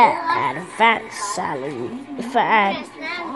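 No technical fault can be heard anywhere in this audio. Nothing in it calls for a repair.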